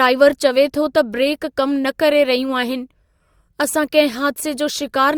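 No technical faults can be heard in this recording.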